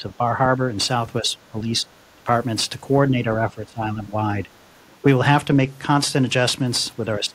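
From 0 to 0.34 s, 1.21 to 1.88 s, 2.18 to 2.28 s, 3.1 to 4.16 s, and at 4.43 s, the speech dips by up to about 10 to 20 dB, thinning or breaking into pieces. This is speech suppressed in double talk, likely an echo canceller mistaking this side's talk, overlapping the far end, for echo. Unlike a codec fault, the level itself is chopped. From 5.17 to 6.67 s comes a Bluetooth SBC bit pool drop: the treble dulls and gritty noise rises, which fits the bit pool falling from about 28 to 13, near 102 kbps. The suppression returns from 6.99 s to the end, cutting up to about 20 dB.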